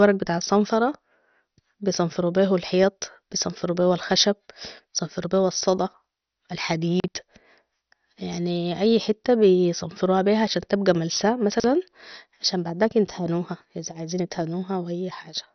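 From start to finish the speech sounds dull and gurgling, with a granular, swirling roughness and nothing at all above about 6.1 kHz. The likely cause is heavy MP2 compression at a low bitrate, consistent with around 48 kbps. Too few bits forced the encoder to shut off its upper sub-bands and quantise the remaining ones coarsely. On a spectrogram there is a hard ceiling near 6.1 kHz, with patchy, flickering blocks below it where bands drop in and out.

At 7.0 s, chunks out of order make a short jumbled stutter lasting until about 7.08 s. A 40 ms slice of audio plays one chunk late, after the slice that should follow it. No audio is lost, but the swap creates three abrupt joins. At 11.52 s, just after "بيها عشان تبقى ملسا", the same fault returns until 11.64 s. This time a 40 ms chunk arrives two chunks late, so a slightly longer stretch sounds scrambled. On the waveform both events show sudden discontinuities at the joins, and the spectrogram shows thin vertical lines at each one.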